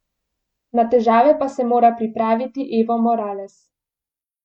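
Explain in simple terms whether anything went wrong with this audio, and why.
Listening to this speech recording, nothing stood out as having gone wrong.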